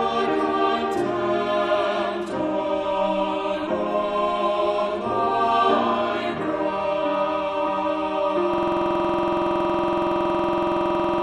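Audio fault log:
8.54–11.23 s, system hang loop: the audio locks into a rapid, rattling stutter at 21.5 Hz that runs to the end, one 46.44 ms piece repeated exactly, dozens of times. The system froze while the hardware kept replaying its ring buffer, which fits a 2048-sample buffer.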